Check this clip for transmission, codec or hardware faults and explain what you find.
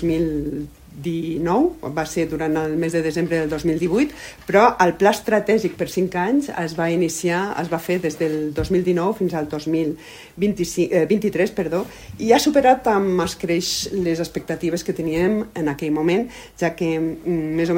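No transmission, codec or hardware faults.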